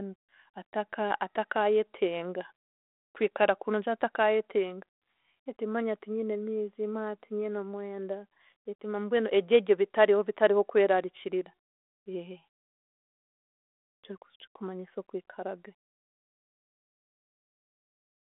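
No fault is present in this speech clip, which is carried over a G.726 ADPCM path at 32 kbit/s that keeps the audio within a telephone band of about 300 Hz to 3.5 kHz, with nothing above 3.8 kHz and only a light coding texture.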